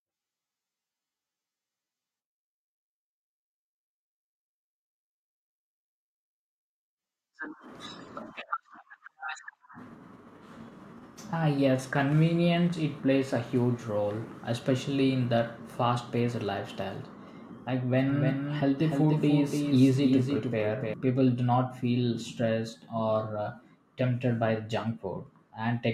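A doubled audio track runs from 18.10 to 20.94 s in this speech recording. A second full-band copy of the talking trails the original by roughly a third of a second, only a few decibels quieter, with no decay or room colouring, so it reads as a hard slapback. It switches on and off abruptly at those edges. The likely cause is the signal being captured again through a slower path, or an edit leaving two offset copies stacked.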